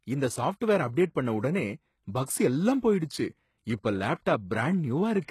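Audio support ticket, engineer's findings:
Likely HE-AAC compression throughout, at a very low bitrate around 16 kbps: treble rebuilt by band replication, nothing above 12.3 kHz, s sounds gritty and lispy, plainly audible.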